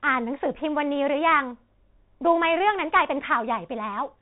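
From start to end, the speech passes through a Bluetooth CVSD headset codec. Nothing above 3.8 kHz survives, so the sound is narrow and boxy. One-bit delta coding at 64 kbps leaves plainly audible damage. S sounds turn scratchy. A granular hiss sits underneath throughout.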